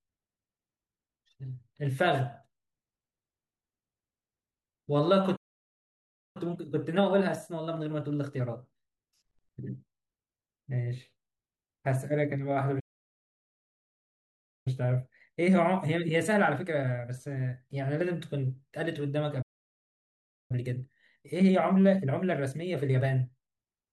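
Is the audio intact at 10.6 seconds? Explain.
Yes, at 10.6 seconds the speech runs intact, with no dropout, click, distortion or other fault audible at that point.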